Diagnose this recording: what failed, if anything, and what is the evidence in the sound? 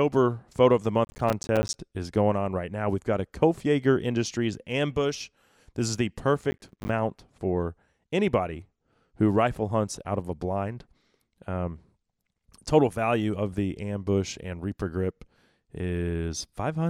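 Two bursts of gritty crackle tear the speech: 1.05–1.74 s after "of the", and 6.51–6.89 s after "ambush this is the". This is processor overload crackle at the driver or buffer stage. Runs of roughly 10 ms buffers missed their deadlines, each leaving a hard-edged silent gap.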